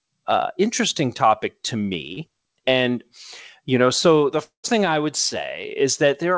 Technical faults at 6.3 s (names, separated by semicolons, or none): none